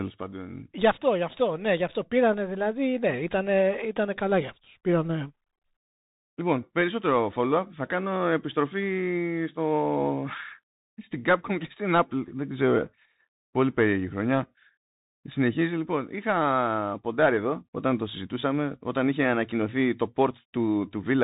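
Throughout the speech, the sound is dull and boxed-in, with nothing above about 3.8 kHz, scratchy s sounds, and a grainy hiss beneath it. It is the Bluetooth CVSD headset codec: one-bit up-or-down steps, which fits a 64 kbps stream, can't track fast, bright sounds.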